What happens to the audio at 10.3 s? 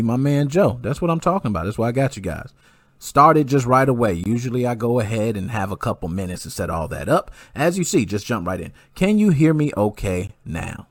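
Two stream segments are stamped with a small gap between them at 10.27 s, on a boundary that fits 6-second segments. The player fills the roughly 20 ms hole with silence, so the speech drops out abruptly with hard edges. Nothing is lost; it is only delayed.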